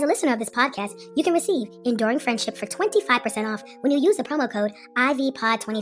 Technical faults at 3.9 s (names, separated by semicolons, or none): wrong sample rate